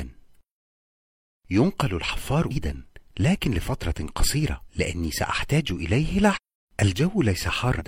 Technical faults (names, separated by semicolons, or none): damaged data in a compressed stream